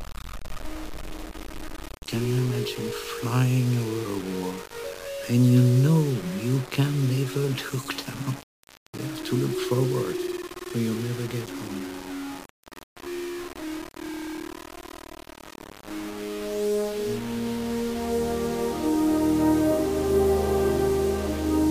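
Grainy distortion runs through the whole clip, tracking the audio, with an error level only about 15 dB below the signal. The likely cause is low bit depth without dither: samples rounded to just 5 bits, so the rounding error follows the audio.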